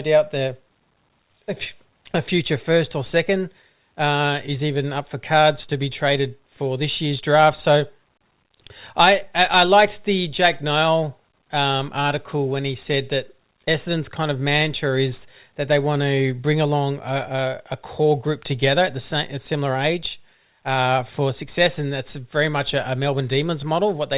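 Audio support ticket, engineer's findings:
No faults found; call-path audio band-limited to 4 kHz.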